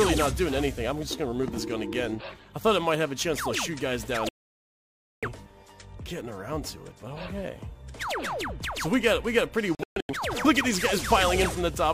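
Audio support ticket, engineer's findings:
Digital broadcast dropout at 4.29 to 5.28 s: audio mutes for about 0.94 s, then returns further on, so that stretch is gone. Again at 9.75 to 10.14 s as several short holes over about 0.34 s, longest about 0.13 s. Receiver muting on lost signal or failed frame checksums.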